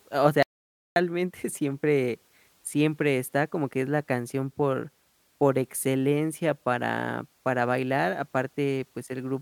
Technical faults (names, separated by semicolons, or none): audio dropout to silence